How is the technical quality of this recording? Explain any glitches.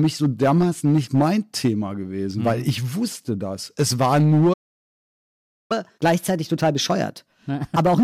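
The recording has three clear technical problems: constant distortion on loud moments, a silent gap partway through, and a speeded-up stretch afterwards.

Hard clipping runs through the whole speech clip. Louder syllables carry a harsh, crackly edge because the signal was driven about 6 dB beyond what one stage could pass, flattening the peaks of a few percent of samples. Those squared-off tops create high harmonics that sound like fuzz.

A playback stall cuts the sound dead from 4.53 to 5.72 s, a gap of about 1.17 s, before it resumes. The likely cause is the player running out of buffered data or its audio thread being blocked, leaving the output silent until it recovered.

Catch-up at higher speed follows from 5.72 s to the end. The speech becomes noticeably faster and higher, running at 1.15 times normal speed and about two semitones sharp. The player is resampling its backlog to recover the time lost in the stall.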